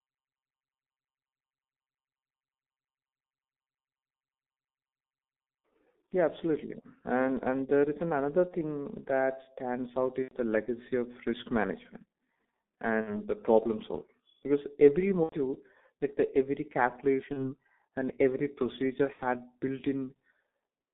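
The whole recording passes through the G.723.1 codec at about 6.3 kbit/s. Only 200 Hz to 3.6 kHz survives. The voice model updates slowly. The speech sounds muffled and hoarse, with heavily blurred consonants.

VoIP packet loss concealed by the speech codec then strikes six times. The decoder fills each gap by repeating its last pitch and filter at falling gain. The breaks come at 8.48 to 8.55 s and at 10.22 to 10.34 s, between "stands out" and "the legacy of risk". They continue at 13.01 to 13.21 s, just before "the problem", then at 15.23 to 15.37 s and at 17.33 to 17.54 s, ahead of "and every procedure". The last is at 19.13 to 19.21 s. The missing audio runs 30 to 90 ms, fitting one to three lost 30 ms frames. Each gap turns into a fading buzzy tone or coloured noise. The speech stays weak briefly afterwards.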